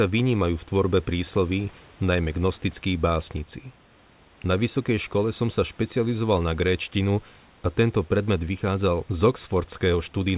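No technical faults are audible.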